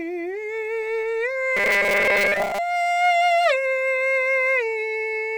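Robotic sound from repeated short buffers, 1.57 to 2.58 s: the music becomes a rigid 200 Hz buzz, likely a 5 ms chunk replayed over most of the missing audio.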